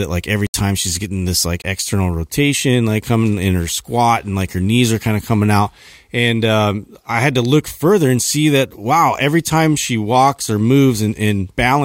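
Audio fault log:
0.47–0.54 s and 1.62–1.64 s: block of digital silence. The speech drops to silence after "like every" for 73 ms, then after "she's getting this like" for 20 ms. Sound stops and restarts with no fade. The first is a short hole.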